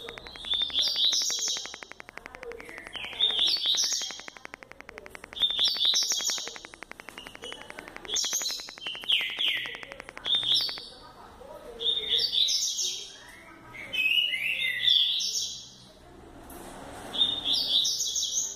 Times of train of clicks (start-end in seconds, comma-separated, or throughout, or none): 0.09-10.79